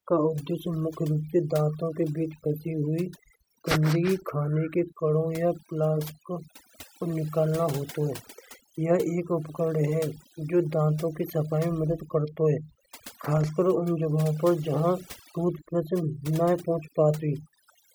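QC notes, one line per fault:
Throughout: overdone noise removal. Between phrases the background drops and breaks up into twinkling, warbling specks. A noise reduction stage set too aggressively is treating every frequency band that sits close to its noise estimate as noise and pulling it far down or out entirely, so quiet detail in the speech is stripped away along with the background.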